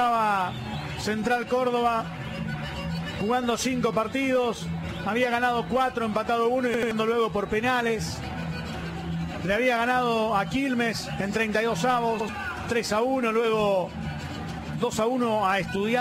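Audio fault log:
6.74–6.91 s and 12.20–12.29 s, repeated buffer: a piece about 85 ms long plays again, twice at 6.74 s and once at 12.20 s, with a hard join each time. That length fits a 4096-sample buffer. About 150 ms and 100 ms of new audio is lost. Unlike a dropout there is no silence, and unlike concealment there is no smearing, only an exact stutter.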